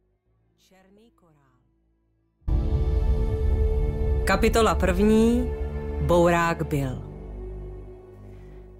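Audio dropout to a faint residue runs from the start of the clip to 2.48 s: the sound is already missing, leaving only a faint trace roughly 35 dB below normal, then snaps back abruptly. This likely came from the wanted signal being lost while the path downstream stayed live.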